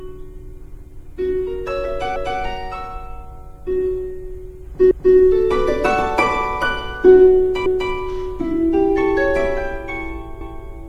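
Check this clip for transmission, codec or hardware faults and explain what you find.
There's one fault, overlapping chunks, at 2.16, 4.91, 7.66 and 10.41 s. The audio was handled in 2.5 s chunks that each restart 250 ms early, so that slice plays twice at every join, a regular stutter-and-click roughly every 2.75 s.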